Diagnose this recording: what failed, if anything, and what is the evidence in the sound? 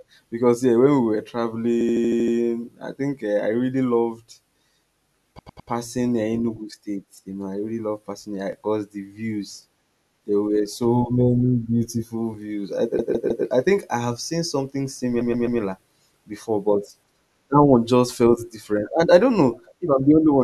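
Repeated frames, at the codec or storage stage. The same short block of audio plays back to back several times over. From 1.81 to 2.35 s, just before "I think", a 78.4 ms block plays 7 extra times and adds 0.55 s. Three more repeats each play a block 3 extra times: 104.5 ms at 5.38–5.70 s, 156.7 ms at 12.99–13.46 s and 130.6 ms at 15.21–15.60 s. On a spectrogram these show as identical tiled patterns, with a vertical line at each seam where the frames don't join.

Clock drift buffer slips, likely at the driver or buffer between two devices. Clicks recur every 3.81 s, about four of them, from 4.39 s after "I really loved" to 17.0 s before "that one just felt". That regular spacing fits a clock mismatch of roughly 400 ppm. At each slip a block of roughly 70 samples is dropped or repeated. The waveform shows a small step discontinuity at each slip, and the spectrogram shows a thin broadband vertical line.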